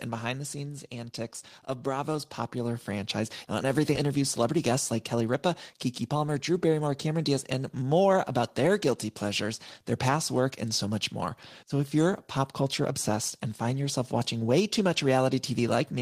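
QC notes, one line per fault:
0.05–0.96 s, automatic gain falling: the input arrived too loud, so the gain control eased level down by about 5 dB, sinking speech and background together rather than just the voice fading.
0.89–3.83 s, automatic gain rising: the control then judged the input too quiet and lifted gain by about 8 dB over nearly three seconds, so speech and room noise swell in step.
3.95–3.97 s, skip ahead: about a second of audio was dropped while later audio was already waiting, so playback jumps forward with no gap or fill, not a silent dropout.
4.05–7.55 s, jitter buffer speed-up: to shed excess buffered delay, short pitch-period pieces were cut repeatedly, roughly a fifth of a second in total, so speech runs about 7% fast at unchanged pitch, ending before "more about their guilty".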